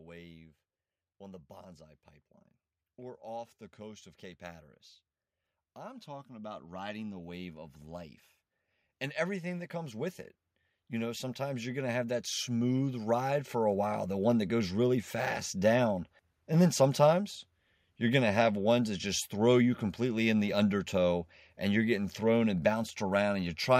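At 5.56 s the automatic gain starts rising. Over the next two and a half seconds, to 8.22 s, the level climbs by about 6 dB. The gain control judged the input too quiet and turned itself up slowly. Voice and room noise swell together. A second rise follows "that comes with it", from 10.75 to 14.42 s. This one adds about 9 dB before "goes really fast down", a longer, stronger creep upward.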